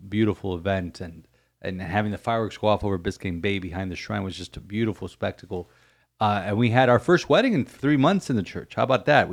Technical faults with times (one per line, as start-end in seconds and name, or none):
none